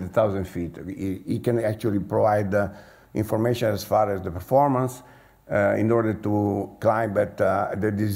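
No technical faults are audible anywhere in this audio. Nothing in the sound points to a problem in how it was captured or carried.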